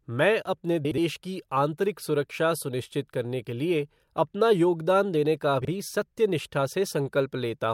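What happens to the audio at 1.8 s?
Nothing goes wrong at 1.8 s; the speech there plays through intact, with no dropout, click, distortion or other fault.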